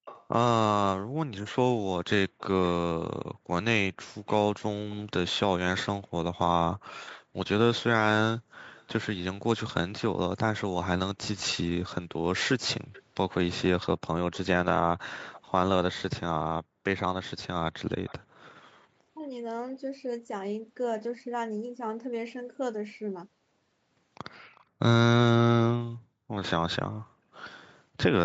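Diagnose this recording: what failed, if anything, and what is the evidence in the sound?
The failure is in the call processing, at the far end's echo canceller. A faint delayed copy of the speech comes back at 0.05 to 0.27 s, 8.74 to 8.88 s, 11.53 to 15.41 s, 16.97 to 18.54 s and 24.55 to 24.63 s. The lag is about 365 ms (about 344 ms at 8.74 s), and the copy sits roughly 20 to 35 dB below the speech. This is echo leak: a loudspeaker's output likely reached a microphone, and the canceller left a residue that was sent back. Reverberation would smear continuously from zero delay. This repeat is detached and lagged by a fixed amount.

At 19.11 to 19.25 s the speech itself collapses by roughly 40 dB for about 150 ms. This is speech suppressed in double talk. The suppressor, likely confused by both sides talking at once, mistook the near talker for echo and ducked it. A network dropout would leave a gap with concealment artefacts or a clean mute. 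Here the level is pulled down briefly by gain reduction. The Opus call path's 8 kHz bandwidth limit is an ordinary coding ceiling and is unrelated to this dip.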